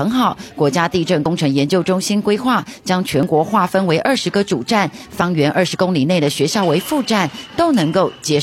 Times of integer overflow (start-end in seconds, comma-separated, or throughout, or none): none